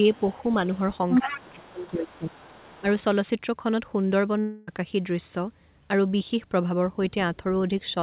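Speech heard through a narrowband call path, with nothing above 4 kHz, as a 64 kbps G.711 A-law link would give. From 0.13 to 1.88 s a second voice from the other side of the call sits underneath the talker at a fairly strong level, roughly 10 dB below the speech. This is the other side's voice leaking through, most likely loudspeaker sound reaching the talker's microphone that the echo canceller failed to fully remove. A much fainter trace of it returns from 2.10 to 2.91 s, around 25 dB down. Overlapping that first leak, from 1.22 to 2.35 s, the talker's own voice sinks for about a second in total, at its deepest by roughly 25 dB. This is speech suppressed in double talk: with both sides speaking at once, the canceller likely mistook the talker for echo and pulled everything down. A much smaller dip of this kind, only a few dB, clips the speech briefly from 7.10 to 7.15 s. At 4.40 s the speech gives way to a continuation of the last sound that fades over about 0.27 s, and at 4.69 s the speech resumes with roughly 0.28 s simply gone. 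That is a long network dropout, where the receiver likely stretched the last received audio to cover packets that never arrived.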